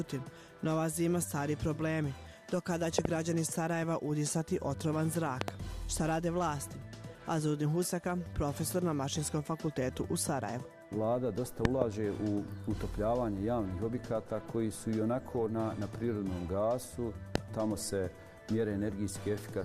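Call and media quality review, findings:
Loud pop, four events: double pops at 2.99–3.07 s, 5.41–5.50 s and 11.65–11.84 s; single pop at 17.35–17.38 s. Peaks around 25 dB above the signal, with the audio continuing underneath. Likely a voltage transient from a plug, switch, static discharge or driver glitch.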